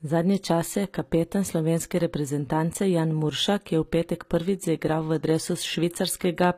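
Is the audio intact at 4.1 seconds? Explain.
No. The HE-AAC compression damage runs through the whole clip. Treble above 15.5 kHz is missing, and s sounds turn gritty, likely from rebuilt upper bands at about 24 kbps.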